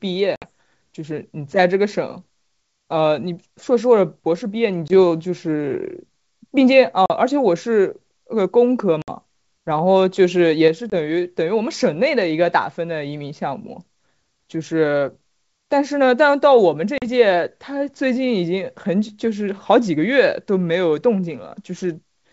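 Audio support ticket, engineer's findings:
Packet loss on an ADPCM call: silent dropouts of 20 to 60 ms at 0.36, 4.88, 7.06, 9.02, 10.90 and 16.98 s. They show as hard-edged vertical gaps on the spectrogram and flat-line holes on the waveform. The speech resumes slightly distorted while the decoder's predictor and step size resync, over a few tens of ms. Wideband G.722 content up to 7 kHz is otherwise clear.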